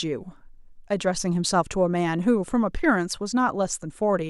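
No audible technical faults.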